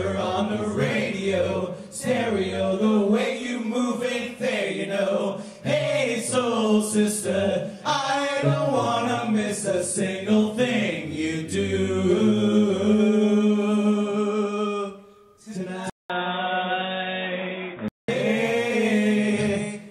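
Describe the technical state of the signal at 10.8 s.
No fault is audible at 10.8 s, and the signal is intact at that moment.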